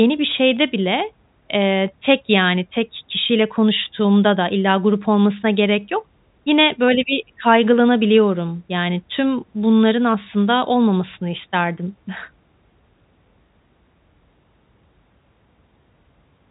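Nothing stood out on listening to this telephone-band speech.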